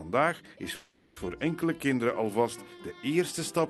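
At 0.75 s the sound stalls in a call audio freeze that lasts until 1.18 s. The receiver fills the 0.41 s hole by stretching the last sound it had into a fading buzz or hiss, with no drop to silence. This is likely the result of packets held up in transit and a jitter buffer that ran dry. When the audio resumes, it carries on from where it stopped. Nothing is lost, but everything after the freeze arrives about 0.41 s late. The call path's coding noise sits underneath, and its top end stops near 12 kHz, which fits an Opus codec.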